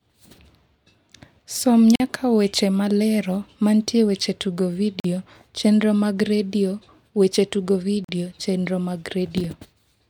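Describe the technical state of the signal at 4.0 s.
At 4.0 s the speech signal is intact, with no audible fault at that moment.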